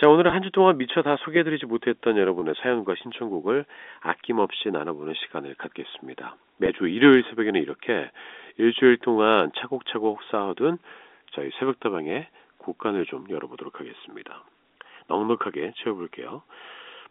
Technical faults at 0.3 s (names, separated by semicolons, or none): packet loss with pitch repetition